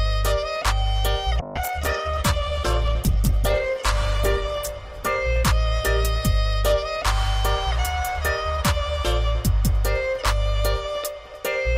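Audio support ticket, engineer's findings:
Call bitrate drop, 1.4–7.01 s: bandwidth estimate fell, Opus encoder coding coarser with highs cut off, sounds consistent with 96 down to 11 kbps; clears by 7.01 s.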